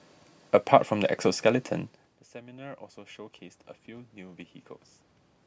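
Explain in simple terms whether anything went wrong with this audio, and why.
From 2.33 to 3.27 seconds, the voice and the room noise behind it slowly swell up together. This is automatic gain rising: the talker moved away around 2 seconds, the sound dropped sharply, and the call's volume control gradually turned itself up.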